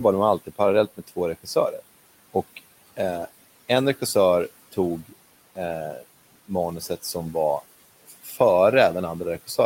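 From 8.08 to 8.38 s, just after "manuset som var", the noise suppressor cut speech. It mistook quiet speech for background and turned it down by about 12 dB. Roughly a fifth of a second sounds swallowed and faint. Room noise sits about 20 dB below the speech.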